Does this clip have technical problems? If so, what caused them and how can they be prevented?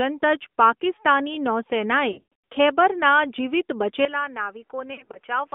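Yes. The clip is speech carried through an AMR narrowband mobile codec, and it has two stretches of lost AMR speech frames.

Throughout, the audio is confined to roughly 200 Hz to 3.6 kHz, with the buzzy, plainly synthetic quality of a low-rate vocal tract model. That points to AMR-NB at around 10.2 kbps. The encoder rebuilds each 20 ms frame from a filter excited by a few pulses, discarding fine detail. On a spectrogram, energy stops at a flat ceiling near 3.6 kHz with nothing above it, and the harmonics look coarse and smeared. Using a wideband codec (AMR-WB or better) end to end prevents this.

Lost AMR speech frames occur from 2.12 to 2.34 s, just after "જ પાકિસ્તાની નૌસેનાએ", and from 4.94 to 5.18 s. In the first stretch, the gaps are scattered over about 320 ms and the longest run is 120 ms. There the sound stretches into a held, warbling tone and sags toward silence, then returns rough. 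The second stretch has shorter dips, none longer than 40 ms. The decoder is repeating the last good pitch and filter settings with shrinking gain. On a waveform the envelope decays smoothly rather than cutting off. On a spectrogram the harmonics run flat and fade, which differs from the moving pitch of real speech. A stronger radio link or error protection that lets fewer frames fail their checksum prevents this.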